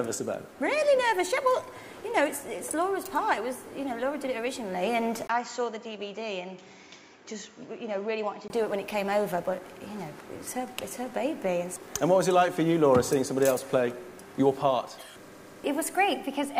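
At 5.27 s there's a 20 ms dropout, then until 8.5 s the sound gets about 10 dB quieter and dull above 7.6 kHz, likely an input switched to a poorer device.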